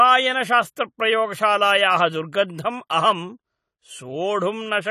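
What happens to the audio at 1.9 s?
At 1.9 s you're hearing the same AAC compression that runs through the whole clip: nothing above about 14.1 kHz, and the speech sounds dull and smeared with a warbly, fizzy edge on sibilants. That's likely a low-bitrate AAC-LC encode, roughly 32 kbps, starving the spectrum.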